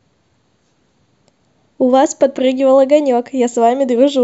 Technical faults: none

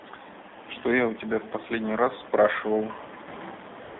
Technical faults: AMR narrowband mobile codec; AMR comfort noise

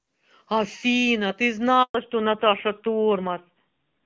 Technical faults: handover gap; fallback to narrowband

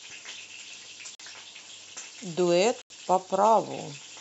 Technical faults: block of digital silence

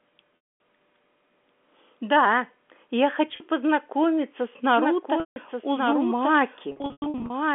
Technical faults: packet loss with pitch repetition; doubled audio track

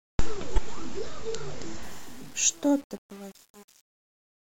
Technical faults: corrupt frame decoded; truncation distortion on a fade

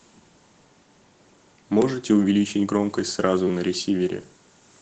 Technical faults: Opus voice compression; repeated buffer

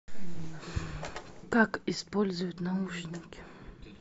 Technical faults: none

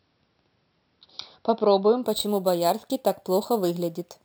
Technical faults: imaging from sample-and-hold upsampling

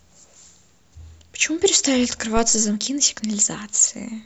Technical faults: phantom power thump

